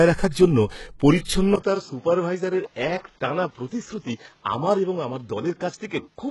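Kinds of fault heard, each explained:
HE-AAC compression: Likely HE-AAC coding at a very low bitrate; treble is synthesised from copied lower bands, so speech sounds heavily coded and nothing passes above 11.5 kHz.
Pre-echo: The codec spread block noise ahead of an attack near 0.29 s, so a hiss of about 47 ms precedes it and blurs its onset.
Input switched to a poorer device: At 1.56 s a 20 ms gap marks a likely change of input; afterwards the band stops at 7.2 kHz, level falls about 5 dB, and new noise appears.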